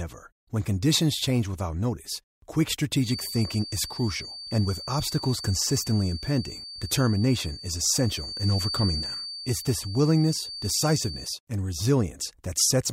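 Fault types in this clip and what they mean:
Feedback whistle: The loudspeaker-to-microphone loop is likely sitting right at the edge of feedback, so it sustains a single frequency without tipping into runaway howl. Here that is a thin, steady tone near 4.6 kHz, roughly ten dB under the speech, running from 2.97 s to 11.36 s. It swells and fades slowly in level and stays pinned at one pitch the whole time.
Block of digital silence: One block was played as zeros, likely because the output buffer went unfilled. The speech drops straight to digital silence and returns with no fade, so each edge produces a hard discontinuity. At 9.04 s the gap lasts about 2.67 ms, which fits a 128-sample buffer. A hole this short is heard as a tick or dip rather than a noticeable pause.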